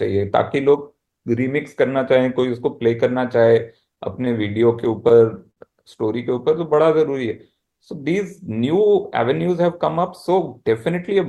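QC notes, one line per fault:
4.25–4.42 s, short stall from a late packet: a packet showed up late, so the receiver stretched the last sound about 16 ms and carried on, leaving a brief hold with a slight buzz or dip.
4.79–5.60 s, repeated stalls (stutter): late packets kept starving the jitter buffer, so five gaps got filled, 92 ms in all, the longest 55 ms, making the sound drag and stutter.
6.67–7.74 s, jitter buffer slow-down: the receiver padded out a thin buffer by repeating pitch periods, adding 71 ms, so the sound plays at 94% speed, same pitch, a bit drawn out.
9.98–11.19 s, jitter buffer speed-up: the buffer was overfull, so short pitch-period chunks got cut, around 70 ms total, pushing playback to 106% at the same pitch, slightly hurried.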